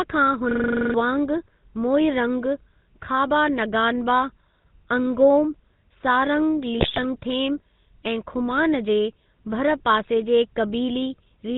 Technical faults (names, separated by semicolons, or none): GSM full-rate codec; system hang loop; GSM bit errors